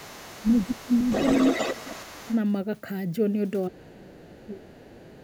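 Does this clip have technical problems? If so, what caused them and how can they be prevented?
Yes. The speech has two related faults from echo cancellation.

Other side's voice leaking through: a second voice is heard from 0.0 to 2.37 s at about 10 dB below the speech, then much fainter, about 30 dB down, from 4.18 to 4.47 s and about 25 dB down from 4.77 s to the end. The likely cause is that the far side, played on a loudspeaker, reached the microphone and the echo canceller didn't fully remove it. On a spectrogram it appears as a second, weaker set of harmonic bands overlapping the main speech. Using a headset or retuning the echo canceller for that device and room would prevent it.

Speech suppressed in double talk: the speech dips at 0.43–0.71 s, 0.88–0.92 s and 1.73–2.31 s by roughly 10 to 15 dB. The longest dip runs from 3.68 to 4.76 s and goes about 20 dB down. The likely cause is the echo canceller mistaking overlapping speech for echo and turning everything down. 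The waveform shows sudden notches in the envelope. A better double-talk detector, or a headset that removes the echo path, would prevent it.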